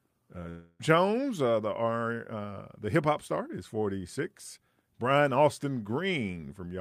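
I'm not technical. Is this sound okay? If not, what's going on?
No. The connection likely stopped delivering audio for a moment, a long network dropout. From 0.49 to 0.82 s the player filled the gap by stretching the last sound into a fading buzz. The speech resumes at "uh the", with that part lost.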